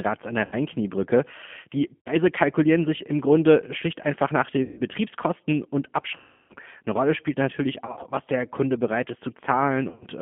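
Telephone-band speech carrying G.729 codec damage throughout, plus six dropouts handled by VoIP packet loss concealed by the speech codec. The whole recording sits between roughly 150 Hz and 3.4 kHz and sounds rough and slightly synthetic, which fits an 8 kbit/s G.729A stream rebuilding the voice from a vocal tract filter, a pitch predictor and a few pulses per frame. On a spectrogram there is a hard ceiling near 3.4 kHz with nothing above it, and the harmonics look blurred and grainy rather than clean.

The concealed gaps fall at 0.45 to 0.55 s right after "an der", 1.98 to 2.10 s, 4.63 to 4.81 s after "schlicht einfach nach", and 6.16 to 6.54 s, which is the longest at 340 ms. Two more are scattered bursts: 7.86 to 8.07 s between "spielt natürlich" and "was der", and 9.89 to 10.05 s. During each gap the decoder keeps repeating its last pitch and filter at falling gain, so the sound is stretched into a fading imitation of the last stretch of voice. 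On a spectrogram these stretches show flat, frozen harmonic stripes, and the waveform shows a tapering envelope with weak, smeared sound for a short while after each gap.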